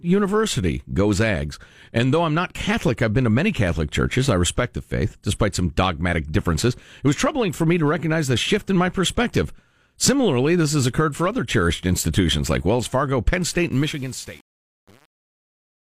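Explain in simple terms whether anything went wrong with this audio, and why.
The fade-out at the end has a fault called truncation distortion on a fade. The volume stage handling the fade kept too few bits and added no dither, which fits a resolution of about 7 bits. As the sound fades away from about 13.7 s, the quiet tail from 13.72 s to 15.93 s loses its smooth shape. Instead it turns into coarse steps, so it sounds gritty.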